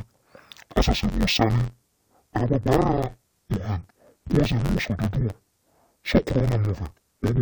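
From start to finish, interleaved audio is being read as planar: each block of alternating left and right samples is split down the middle, its first half taken as left and its second half as right, so each channel gets both channels' samples squeezed together at half speed. The blocks here are short, about 10.88 ms, so the speech keeps its pace but turns dull and robotic, with a steady buzz at roughly 92 Hz and no clear octave drop.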